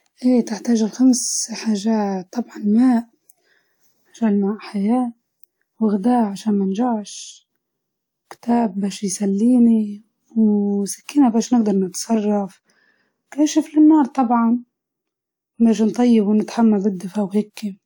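No technical faults occur at any point in the speech, so there is nothing to describe in time order.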